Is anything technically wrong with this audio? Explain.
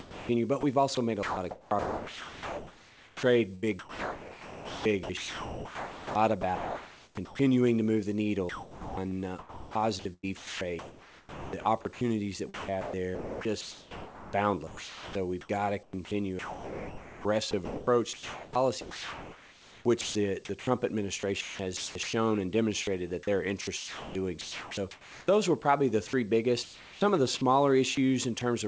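Yes, the voice detector is chopping the sound through most of the clip. It switches in and out from 0 to 7.39 s, 8.49 to 12.01 s, 12.54 to 20.67 s, 21.19 to 22.13 s, 23.61 to 25.27 s, 26.07 to 27.41 s and 27.95 to 28.41 s. This is sound chopped by the voice detector: it's likely the sender kept deciding quiet parts were background and swapped them for comfort noise. More than half of the first two stretches (about 5 s and 2 s) gets replaced. The result is choppy.

There's also one short sound dropped by the voice detector at 22.83 to 22.87 s. For about 40 ms the sound gives way to steady comfort noise, then returns, likely once the detector retriggers. Everything sits under an 8 kHz ceiling, which fits a wideband call codec like G.722.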